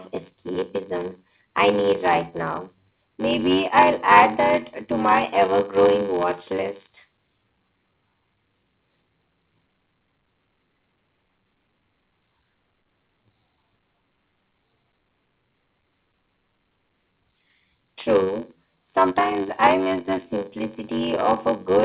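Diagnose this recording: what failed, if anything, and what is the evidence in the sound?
The buffer stage has a block size mismatch (padded) for the whole clip. A steady buzz at 93.8 Hz runs under the speech, which plays at 0.861 times normal speed with the pitch about right. That fits short writes zero-filled out to a 512-sample read, with nothing above 4 kHz from the call path.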